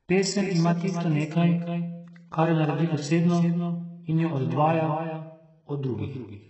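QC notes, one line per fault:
Throughout, doubled audio track: a second full-band copy of the speech trails the first by roughly a third of a second, around 10 dB down, dry with no room tail, so each phrase gets a flat ghost repeat. Likely a second capture path or misaligned edit.
Throughout, HE-AAC compression: the treble is rebuilt rather than recorded, with nothing above 8 kHz, so s sounds come out gritty and lispy and the top end rings metallic. Heavy damage consistent with a likely 8 kbps HE-AAC encode.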